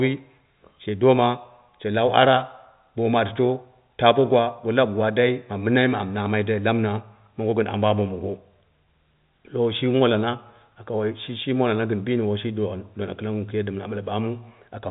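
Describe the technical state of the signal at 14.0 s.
At 14.0 s the audio is intact, with the speech passing cleanly through G.711 telephone coding, whose band stops near 3.8 kHz and whose faint quantisation hiss tracks the level of the speech.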